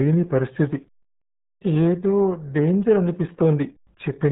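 Speech squeezed through the RealAudio 14.4 codec: the signal was coded at a very low rate, with damage consistent with RealAudio 1's roughly 8 kbit/s dial-up design, and the coder discards everything above about 3.9 kHz. Throughout the clip this leaves the speech heavily muffled, with no top-end air or sibilant detail, and the coarse modelling of what remains gives it a thick, gargling texture across the whole recording.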